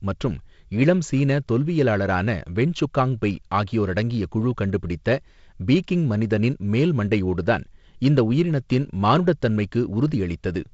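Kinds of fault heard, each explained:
Nothing in this speech stands out as a fault.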